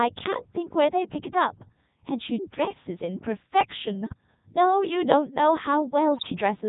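From the start the whole clip runs through the Codec 2 vocoder, which points to its 3.2 kbit/s mode. Only pitch, voicing, energy and a rough spectral envelope survive, and the decoder rebuilds the voice from sine waves rather than the original waveform. That gives it the robotic, buzzy quality you hear all the way through, and the damage here is heavy: the speech sounds synthetic rather than merely thin.

At 4.03 to 4.14 s there's a burst of bit errors on digital voice radio. Flipped bits reached the vocoder, and since each bit steers the pitch, level, voicing or spectrum of a whole frame, the voice lurches. It sounds like a short warbly bleep. The length fits about four corrupted frames, and the error rate looks to be around a couple of percent. A second, nastier burst hits at 6.15 to 6.30 s, lasting about five frames and pointing to roughly double that error rate. The pitch and tone jump harder there and collapse briefly into robotic gibberish.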